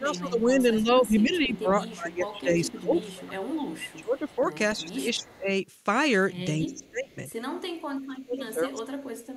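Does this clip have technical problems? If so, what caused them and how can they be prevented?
Yes. The speech is suppressed in double talk from 0.0 to 5.5 s, from 6.59 to 7.18 s, and from 7.88 s to the end. The voice repeatedly dips and breaks up by about 20 to 30 dB, most deeply in the final stretch. This is likely an echo canceller that could not tell this talker apart from the far side's loudspeaker echo and turned both down. The loss follows when the other side talks, not the room or network, which sets it apart from dropouts. A canceller with better double-talk detection, or a headset on the loudspeaker side, would prevent it.

There are echo leaks from 1.19 to 2.73 s, from 3.7 to 5.28 s, and briefly at 6.82 to 6.9 s. A faint delayed copy of the voice trails it by 293 ms, about 30 to 35 dB below the speech. This is likely residual echo that a speakerphone's canceller failed to remove and sent back. 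The fixed 293 ms lag and the separate, weaker copy distinguish it from room reverberation, which blends into the voice without a clear delay. Lowering the loudspeaker volume or using headphones on that side would prevent it.

The background is gated by the echo canceller from 7.52 to 7.6 s. The room sound drops by about 10 dB for a moment and then returns. The canceller clamped the microphone while the loudspeaker played. Unlike double-talk suppression, this affects the room tone rather than the voice, and it lasts only a fraction of a second. Gentler suppression settings, or comfort-noise fill in the canceller, would prevent it.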